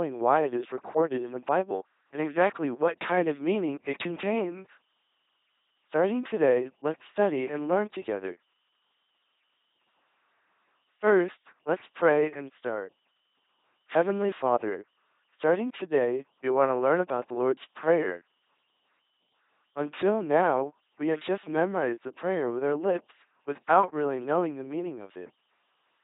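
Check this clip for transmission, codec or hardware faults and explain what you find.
The speech has been through an LPC-10 vocoder, with heavy codec damage across the whole clip.

Throughout, each frame is rebuilt as either pure pulse-train buzz or pure noise through a ten-pole filter, which fits a 2.4 kbit/s LPC-10 stream. It sounds mechanical and robotic. A spectrogram shows rigid harmonic combs alternating with flat noise bands, and nothing above 3.8 kHz.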